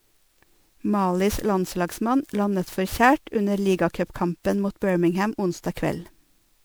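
Throughout, the speech is swirly, hollow and smeared with blurred attacks, worse than one encode explains: generation loss, likely from around seven MP3 passes.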